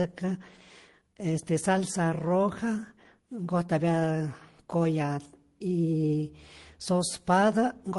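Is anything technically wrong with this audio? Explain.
Yes. Throughout the clip the speech carries the mixed artefacts of more than one lossy codec, and nothing is heard above 11.3 kHz. The likely cause is transcoding between lossy codecs. The sound points to a low-rate Opus encode, around 16 kbit/s, later re-encoded as MP3 at roughly 49 kbit/s. The MP3 stage spends its bits reproducing the Opus damage and adds its own artefacts, so both kinds of degradation are heard together.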